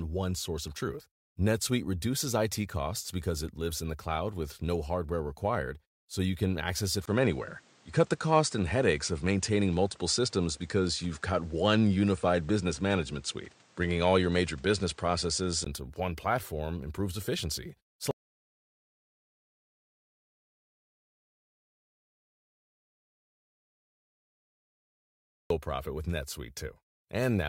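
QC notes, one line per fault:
7.06–15.66 s, input switched to a poorer device: speech turns duller with nothing above 9.5 kHz, roughly 5 dB level shift, new background noise well under the voice, 20 ms gap at the switch, likely a fallback mic.
18.11–25.50 s, audio dropout to silence: about 7.4 s of silence with no room tone at all, so the input was likely lost while silence kept being written.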